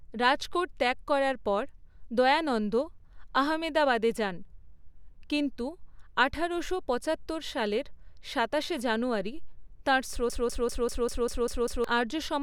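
A speech recording that falls into a broken-record loop from 10.30 s to 11.84 s: one 197 ms fragment plays eight times back to back, identical each pass, and the speech that belonged in that span never arrives. The exact, undecaying repeats distinguish it from an echo, which fades and overlaps new sound, and from a dropout, which leaves a gap. The likely cause is a stalled player or stream re-sending its last buffered fragment.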